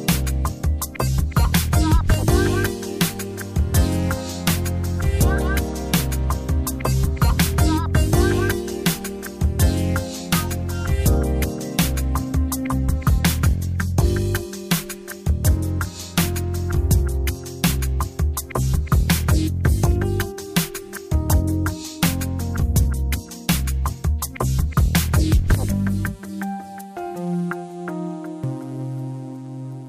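No technical faults are audible anywhere in this audio.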